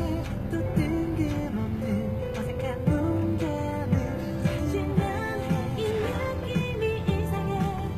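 HE-AAC compression runs throughout this recording of sounds, and its damage is plainly audible. The treble is likely not the original but a rebuilt copy: spectral band replication transposes lower bands upward and shapes them with a coarse envelope, so the top end keeps its brightness while its fine structure no longer matches what sits below the crossover. Nothing is present above 14.9 kHz, and the coarseness fits a low bitrate of around 20 kbps.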